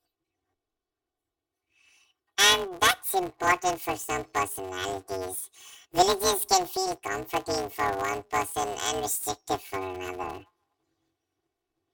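Throughout the speech, planar audio is being read as interleaved: each short block stores all its left samples followed by all its right samples, but playback treats them as alternating left-right pairs. Each block is squeezed to play twice at double speed, first the left half and then the right. The blocks are only about 5.33 ms long, which fits a 256-sample block, so there is no clear octave jump. Instead a robotic buzz at about 188 Hz, the block rate, runs through the whole clip.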